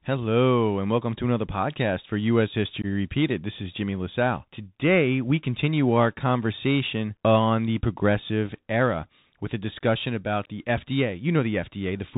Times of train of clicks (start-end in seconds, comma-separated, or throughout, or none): none